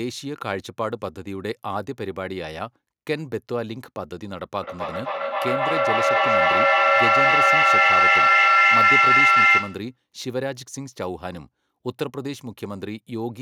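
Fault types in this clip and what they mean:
feedback howl: two devices on the call in one room loop sound back louder each pass, building a roughly 1.5 kHz howl pulsing about every 300 ms, peaking about 11 dB above the speech.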